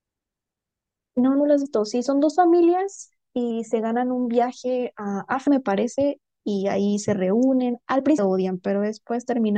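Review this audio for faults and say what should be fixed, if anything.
Compressed frames skipped at 1.65 s, 5.46 s and 8.17 s. The speech jumps ahead each time, by roughly a tenth of a second, then about a third, then about 0.4 s. The gaps fit whole 24 ms frames going unplayed. To prevent it, check file integrity after transfer and re-encode from the original source.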